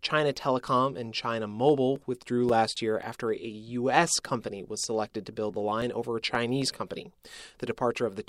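From 1.69 to 3.29 s the speech carries CD scratch ticks. Seven regular ticks arrive about four times a second, the longest lasting several milliseconds. A blemish on the disc spoils more data than error correction can repair, once per revolution. The player then patches or mutes the damaged samples. Just after "was selected to build", a second run begins. Nine shorter ticks follow between 5.55 and 7.68 s, again about four per second.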